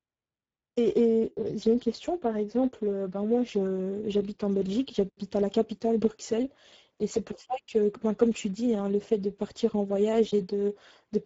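Speech runs through the Speex codec for its whole length, and the damage is plainly audible: a hoarse, noisy grain, which points to a low setting around 10 kbps that leaves the excitation starved of bits. On a spectrogram nothing appears above about 7.7 kHz, and the region above 4 kHz shows smeared, noise-like texture rather than clean harmonics.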